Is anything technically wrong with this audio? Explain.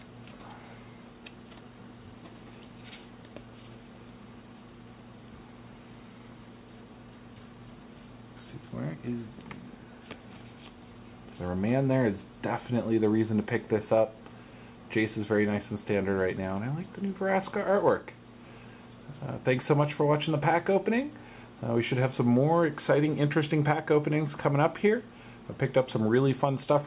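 No, nothing stood out as technically wrong on listening to this audio.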